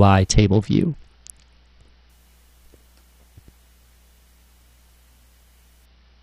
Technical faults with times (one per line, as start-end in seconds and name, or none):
0.30-2.10 Bluetooth SBC bit pool drop
5.85-6.22 Bluetooth SBC bit pool drop